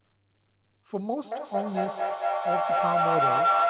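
From 1.24 s to the end of the clip, a feedback howl builds. The microphone picks up a loudspeaker on the same call, and each trip around the loop adds gain. The sound narrows to a tone near 1.5 kHz, with the loop repeating roughly every 200 ms and the howl peaking about 8 dB above the speech. It is confined below 4 kHz, which fits a G.711 A-law call path.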